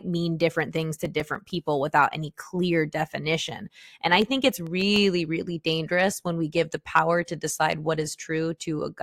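Speech with CD scratch ticks in two runs, each eight ticks at about eight per second: 0.61 to 1.65 s (longest around 5 ms) before "without any clear definition", and 4.22 to 5.26 s (around 2 ms) before "really dangerous when we". Each tick is the player covering data from a blemish that error correction couldn't rebuild, once per disc turn.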